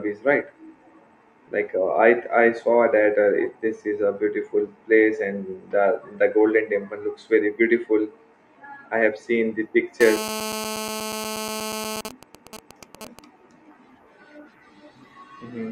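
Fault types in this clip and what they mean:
GSM phone buzz: from 10.01 to 12.01 s, a hard, raspy buzz at about 217 Hz with many harmonics sits about 9 dB below the speech, nearly steady. A 2G phone in a call nearby transmits in bursts, and the audio circuit rectifies each radio pulse into sound.
GSM signalling bursts: from 12.05 to 13.19 s, even ticks with a longer 217 Hz buzz twice a second follow, quieter, roughly 15 dB under the speech. The nearby phone, its user now silent in the call, sends only short groups of bursts, which the circuit rectifies.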